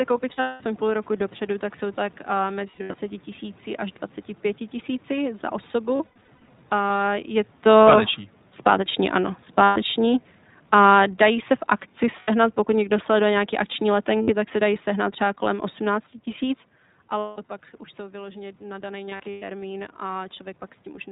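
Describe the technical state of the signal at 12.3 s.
At 12.3 s the signal is just leaving a burst of lost iLBC frames, 12.20–12.30 s. The decoder filled about 80 ms, which fits four 20 ms frames, by repeating the last pitch cycle with added noise. Unlike a dropout to silence, it sounds like a held, slightly buzzy vowel, and the voice recovers immediately afterwards.

Underneath, automatic gain falling runs from 6.73 to 16.08 s, lowering the level by about 10 dB. Unlike a talker leaning back, voice and background sink together.

Throughout, the iLBC codec, whose sound fits its 15.2 kbps mode, cuts everything above 4 kHz and gives the speech a plainly rough, synthetic edge.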